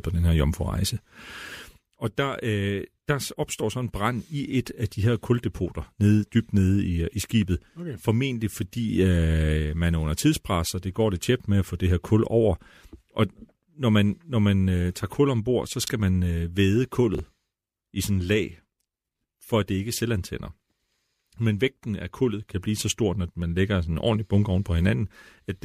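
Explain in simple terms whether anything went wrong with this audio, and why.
Two short chunks out of order happen, at 15.84 to 15.88 s after "tager kul ombord så" and at 17.15 to 17.19 s after "man øh væde". A tiny piece of speech plays three pieces late, so that moment sounds jumbled.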